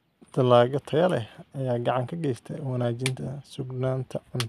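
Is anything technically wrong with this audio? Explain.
No, nothing technically wrong.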